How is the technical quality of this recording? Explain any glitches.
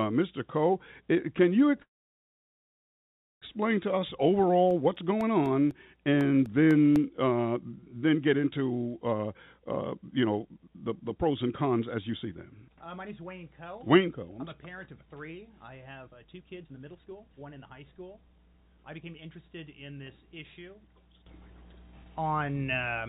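The recording has three kinds of glitch, all heard over narrowband audio with nothing above 4 kHz, which fits a G.711 mu-law call codec.

From 1.82 to 3.45 s there is a call audio freeze. The sound stops for about 1.6 s and is almost entirely silent before resuming where it left off. The likely cause is delayed packets draining the jitter buffer. On the waveform this shows as a flat line, and on the spectrogram as a blank vertical band.

From 4.71 to 6.96 s there are periodic USB or driver dropouts. Roughly ten tiny silences of about 1 ms each occur every 0.25 s and are heard as regular ticks. They appear as thin notches in the waveform and as faint vertical lines on the spectrogram.

There are two jitter buffer speed-ups, at 9.13 to 14.36 s (115%) and 15.04 to 19.03 s (120%). Pitch-period pieces are cut out, removing roughly 0.7 s each time, so the sound hurries while the pitch stays the same. 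On the spectrogram the harmonics keep their height but events are compressed in time.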